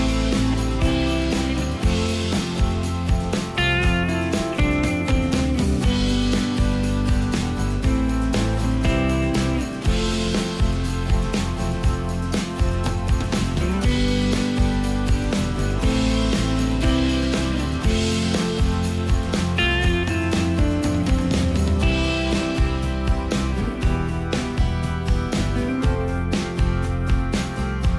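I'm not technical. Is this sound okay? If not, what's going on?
Yes, this one's fine: nothing goes wrong anywhere in it, so there's nothing to worry about.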